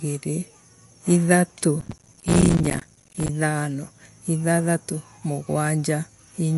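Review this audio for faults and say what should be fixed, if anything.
The whole clip sounds watery and swirly, with nothing above 11.3 kHz. That's likely MP3 compression at a low bitrate around 51 kbps zeroing weak frequency lines. Re-export from the source at a higher bitrate.

From 1.81 to 3.29 s there's processor overload crackle: roughly a hundred tiny silent gaps, each around 5 ms long, tearing through the speech as the processor keeps missing buffer deadlines. Give the audio thread more headroom or use a larger buffer to prevent it.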